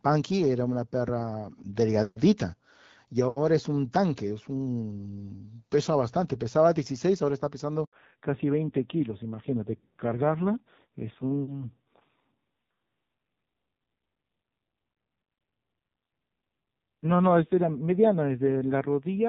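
At 7.85 s there's a handover gap: the call jumped networks and no speech frames came through during the switch. The speech cuts out for about 80 ms, until 7.93 s, and whatever was said in that gap is simply gone.

Right after, at 7.93 s, there's a fallback to narrowband that lasts to the end. Before it, the HD Voice codec sounded clear, consistent with roughly 12.65 kbit/s AMR-WB. After it, nothing above 4 kHz remains, and the speech turns dull and gritty, which fits AMR narrowband at around 5.9 kbit/s.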